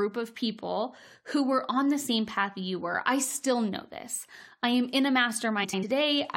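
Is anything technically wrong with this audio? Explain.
Yes. From 5.64 to 5.84 s, there are frames out of order. Two neighbouring blocks of about 93 ms each were decoded in swapped order. This short stretch of speech flutters.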